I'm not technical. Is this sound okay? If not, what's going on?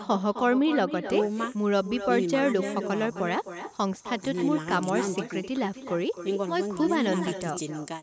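No. There is echo with no canceller. Throughout, the speech returns about a third of a second later as a quieter, hollow copy picked up from the other side's loudspeaker.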